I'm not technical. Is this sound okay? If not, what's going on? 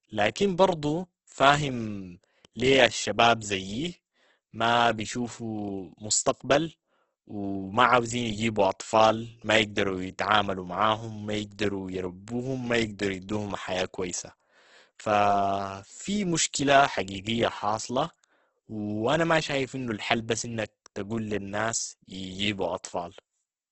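No. The recording was likely squeezed hard by Opus compression, which shrinks audio files by keeping only a rough sketch of the sound when too little space is allowed. Here that damage is heavy and runs through the whole clip. The speech sounds grainy and rough, with a hiss-like texture where clean detail should be, and everything above about 8.2 kHz is gone, so the sound has lost its crisp, airy top end.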